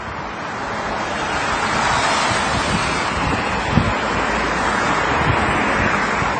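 A short clip of sounds, with a dull, smeared top end all the way through: nothing above 9.4 kHz, plus layered swirly and grainy artefacts. That mix points to transcoding between lossy codecs, likely a low-bitrate AAC pass, then WMA, finally MP3.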